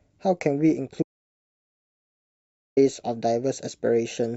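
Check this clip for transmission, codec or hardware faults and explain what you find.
There's one real problem: an audio dropout to silence from 1.03 to 2.77 s. The speech cuts off mid-flow and about 1.7 s goes silent, with no room tone at all. The likely cause is a lost input that the recorder kept writing as silence.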